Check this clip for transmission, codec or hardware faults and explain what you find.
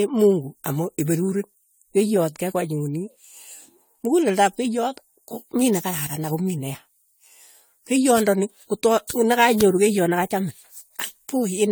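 One codec fault runs through the whole speech clip. Generation loss, likely from repeated AAC-LC re-encoding around seven times at about 96 kbit/s, leaves swirly, hollow, smeared speech with blurred attacks.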